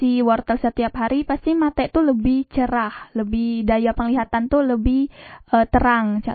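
MP3 compression throughout: the treble is cut flat above 4.5 kHz and the speech sounds plainly watery and swirly, likely from an encoder starved of bits, fitting 24 kbps.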